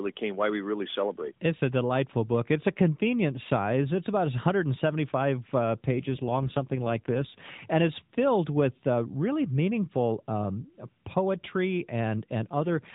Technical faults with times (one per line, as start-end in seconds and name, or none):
5.88-7.71 AMR rate drop
12.52-12.94 AMR rate drop